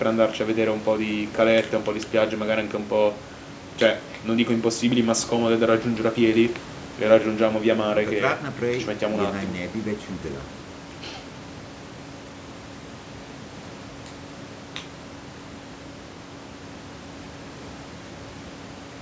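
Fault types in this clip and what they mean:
No technical faults are audible.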